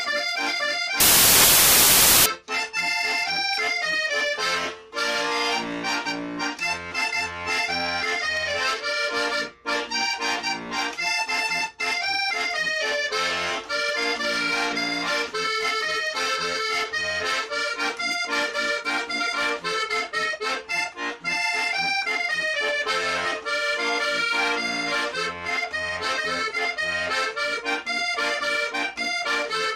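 Samples built from the wrong bytes disrupt the audio from 1.00 to 2.26 s. For that stretch the reader assembles each sample from its bytes incorrectly. It may be off by one byte, reversing byte order or assuming the wrong alignment. The rapidly changing low bits end up as the dominant part of every value. The result is loud, harsh broadband noise in place of the sound.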